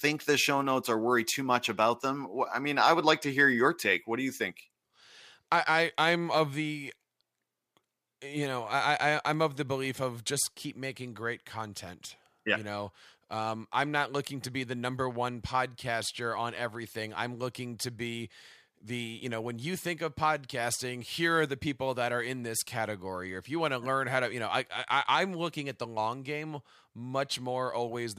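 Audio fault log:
9.17–10.03 s, CD scratch ticks: six tiny clicks, the longest about a millisecond, recur once per disc turn as damage defeats error correction, ending before "of just keep making".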